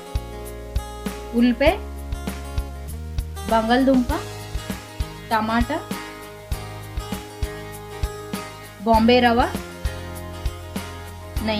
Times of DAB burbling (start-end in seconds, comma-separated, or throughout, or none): none